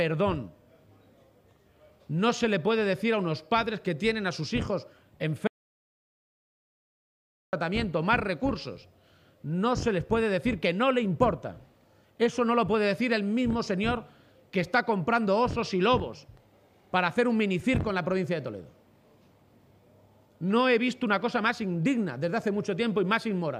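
At 5.47 s the sound cuts off abruptly and returns at 7.53 s. This is an audio dropout to silence lasting about 2.06 s. The gap is silent, with no room tone. The input was likely lost while recording continued. Anything during it is gone.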